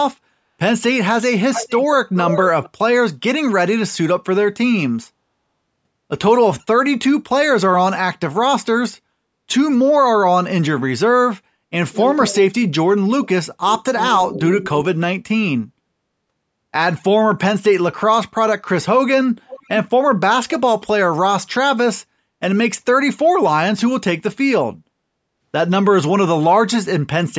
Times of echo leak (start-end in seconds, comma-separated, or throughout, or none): 1.53-1.86, 2.15-2.70, 19.48-19.69